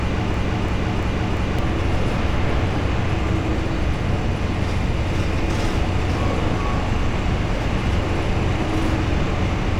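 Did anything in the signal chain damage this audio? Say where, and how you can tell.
Yes. From the very start to about 1.59 s, a short fragment of about 0.34 s repeats exactly, back to back, four times, already looping when the clip begins. It has the stuttering, identical-every-time character of a broken-record loop, after which the sound moves on normally. This most likely happened at the buffer or playback stage: a stalled player or stream kept re-sending the last chunk it held, and the audio that belonged in that span is lost.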